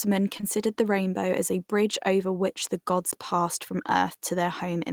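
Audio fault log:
0.37 to 0.45 s, short concealed packet loss: two consecutive 20 ms packets arrived too late, and the receiver extended the preceding speech to bridge them before blending back. The result is a soft smear or wobble with no hard edge, which distinguishes it from a zeroed gap.
3.11 s and 4.15 s, block of digital silence: the output abruptly drops to silence for about 15 ms and then 5 ms, as when a buffer isn't filled in time. The instant cut and return are too short to be heard as silence and come across as a tick or dip, not a smoothed patch.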